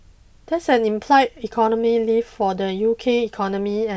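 No technical faults can be heard anywhere in this speech recording.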